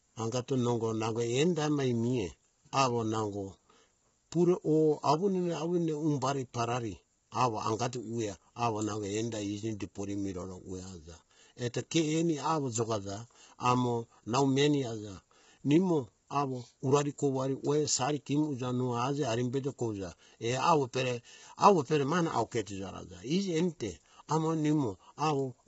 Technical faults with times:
0.00-25.68 low-delay AAC compression

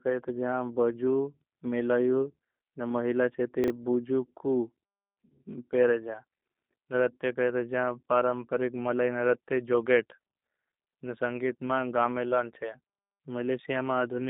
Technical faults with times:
0.00-14.29 G.729 codec
3.64-3.70 chunks out of order

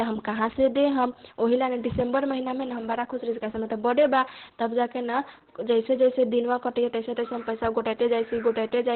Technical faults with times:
0.00-8.95 Opus voice compression

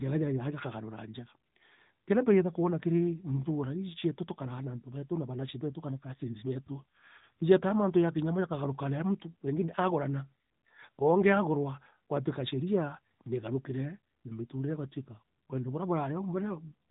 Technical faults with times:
0.00-16.90 AMR narrowband mobile codec

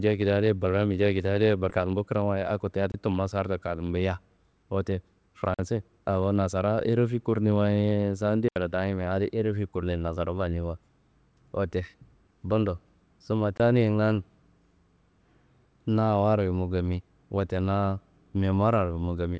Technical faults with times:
1.70 skip ahead
1.79-2.77 jitter buffer speed-up
2.92-2.94 block of digital silence
5.54-5.59 block of digital silence
8.48-8.56 block of digital silence
13.57-13.60 block of digital silence

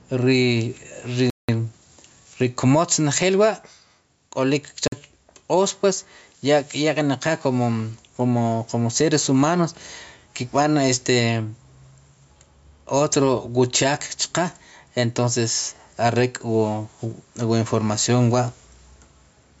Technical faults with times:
0.00-19.60 gain pumping
1.30-1.49 block of digital silence
4.88-4.92 block of digital silence

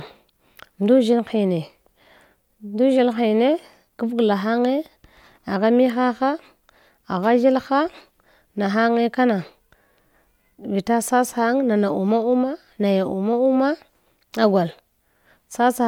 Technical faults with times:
none

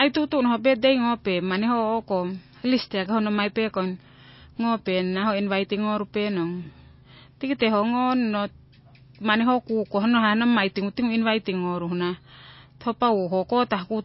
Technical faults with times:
0.00-14.04 low-bitrate audio saved at a high bitrate

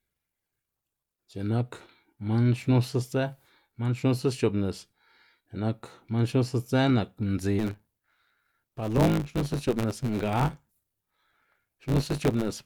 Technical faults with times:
7.58-12.66 block size mismatch (truncated)

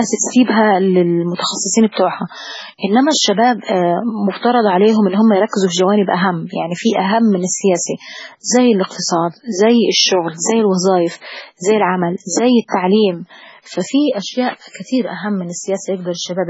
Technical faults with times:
0.00-16.50 MP3 compression

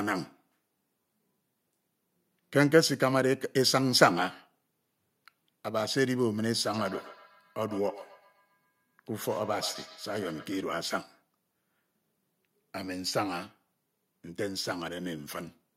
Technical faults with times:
6.74-10.68 feedback echo between two devices

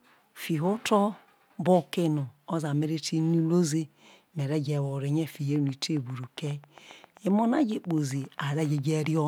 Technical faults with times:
5.56-9.18 train of clicks

